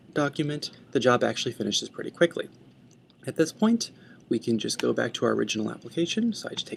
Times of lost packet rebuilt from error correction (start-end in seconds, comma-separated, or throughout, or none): none